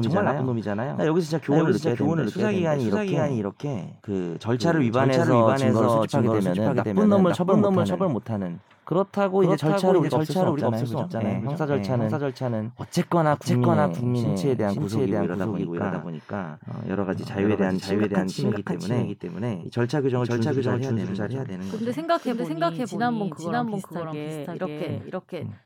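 From start to finish, the speech carries a doubled audio track: a second, equally loud copy trails the original by about half a second, dry and full-band with no room colour. It's likely a second capture path or a misaligned edit stacking two copies.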